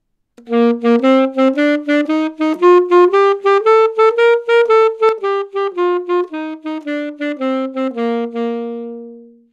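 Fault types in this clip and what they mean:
Sudden gain jump: At 5.09 s the whole recording drops by about 6 dB in an instant and stays there until the end. There's no fade, just a hard step from one sample to the next. The background noise falls by the same amount as the sound in front of it, so this is a change to the signal level itself and not something in the scene getting quieter. The likely cause is a gain setting applied without a ramp.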